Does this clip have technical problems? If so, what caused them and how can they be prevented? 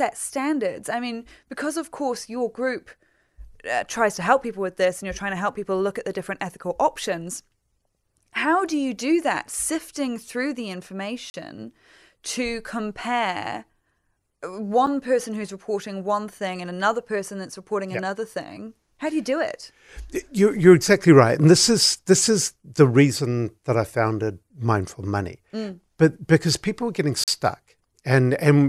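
Yes. This speech has three blocks of digital silence, where the signal drops abruptly to silence and returns with no fade: 11.30 to 11.34 s (40 ms), a 7 ms tick at 14.86 s just before "person who's reporting one", and 27.24 to 27.28 s (40 ms) just after "because people are getting". Such dropouts point to the audio buffer not being filled in time. Larger buffers and less competing processing load would prevent them.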